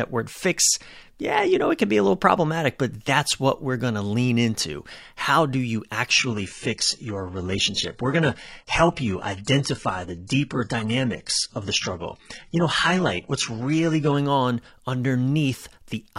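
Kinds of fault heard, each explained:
Adaptive stream at a lower bitrate: At 6.18 s the quality drops suddenly, with no gap. The connection slowed, so the player switched to a much thinner stream. Treble turns synthetic, nothing sounds above 11.1 kHz, and codec artefacts rise. Full quality returns at 14.18 s.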